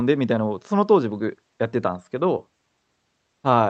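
No technical faults can be heard in the speech; it comes through the call path as expected, with the Opus codec's usual coding texture and a top end that stops around 8 kHz.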